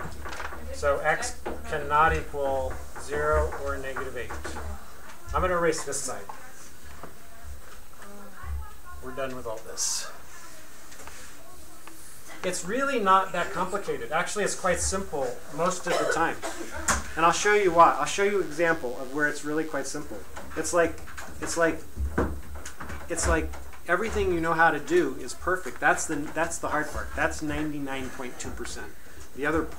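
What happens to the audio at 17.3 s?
A thin, steady buzz sits under the sound from 16.75 s to 19.83 s, pitched at 100 Hz and bristling with harmonics, roughly 25 dB below the main signal. This is DECT cordless phone buzz: a nearby handset or base station transmits a brief radio burst every 10 ms, and somewhere in the audio circuitry those bursts are rectified into the signal path, turning the 100 Hz burst rate into an audible, raspy tone.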